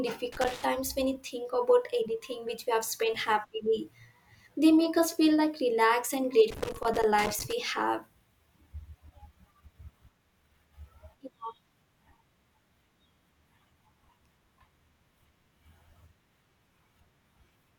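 Loose connector crackle breaks into the speech from 0.32 to 0.64 s, then again from 6.51 to 7.53 s. A worn or dirty contact keeps making and breaking. The signal is chopped in rapid, irregular bursts. It sounds like scratchy crackling over the speech.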